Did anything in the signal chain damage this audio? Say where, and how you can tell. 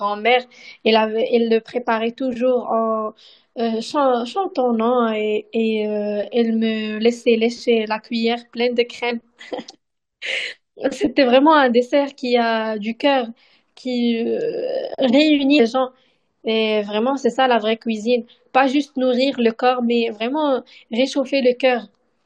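Yes: compressed frames skipped at the codec stage, at 9.10, 10.46 and 15.58 s. The speech jumps ahead by about 20, 40 and 150 ms, multiples of a 21.3 ms frame, so whole frames were never decoded.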